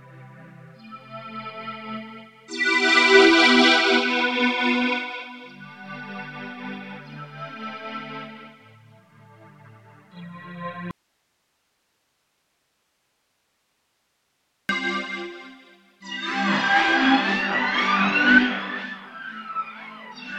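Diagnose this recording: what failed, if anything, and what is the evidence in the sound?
An audio dropout to a faint residue runs from 10.91 s to 14.69 s, a gap of about 3.8 s. The sound cuts off abruptly mid-flow and returns just as suddenly, and the gap holds only hiss, about 50 dB below the normal signal level. The path downstream clearly stayed live while the source was lost, which points to a likely break in the analogue wiring or input connection. A natural pause or fade would taper, and a digital dropout would leave true silence rather than this steady hiss.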